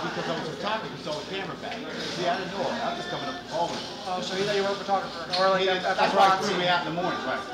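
Nothing technically wrong can be heard in this audio. There are no faults here to place in time or to trace back to a cause.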